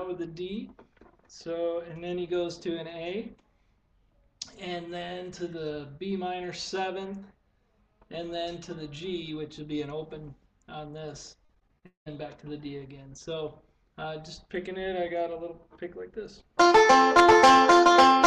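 Around 11.45 s to 12.08 s the sound turns choppy and robotic: that's repeated packet loss. Over that stretch eight gaps land one after another, and each gets papered over by stretching the last bit of sound, so roughly half the span is filler rather than real audio. The longest hole runs about 198 ms, and altogether around 340 ms is missing, which is why it sounds clipped instead of smooth.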